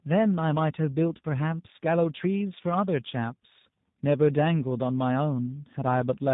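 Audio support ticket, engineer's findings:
Tandem speech coding, present throughout: the call was decoded and re-encoded at each link border, from CVSD 64 kbit/s to G.711 mu-law 64 kbit/s to G.729A 8 kbit/s. That puts two speech codecs in series. G.729A re-encodes speech that CVSD had already degraded. Audible result: rough, muffled, warbly speech with nothing above 3.8 kHz, worse than a single G.729A hop would produce.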